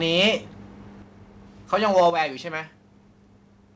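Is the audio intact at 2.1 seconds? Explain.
No. The sound is in microphone overload from 1.73 to 2.22 s: peaks exceed the converter's ceiling by about 5 dB, so their tops are flattened, giving a harsh crackle on the loudest moments, likely from an input volume set too high. At 2.10 s the microphone volume steps down by about 7 dB in a single jump, most likely the call software lowering the device's input after detecting the distorted peaks, so sound and background drop together abruptly.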